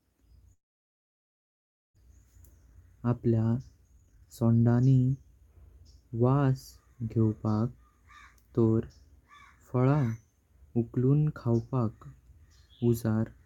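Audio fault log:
0.53–1.99 s, long network dropout: the sound decays into a brief fading buzz, then about 1.3 s of near-silence, likely because packets stopped arriving. About 1 s of audio never returns. Waveform shows a tapering tail then a flat line, and the spectrogram goes blank.
2.09–5.69 s, jitter buffer speed-up: the receiver trims short pitch-period slices to drain its excess backlog, roughly 0.4 s in total. Speech runs about 111% fast at unchanged pitch and sounds hurried. Spectrogram harmonics stay level while syllables compress in time.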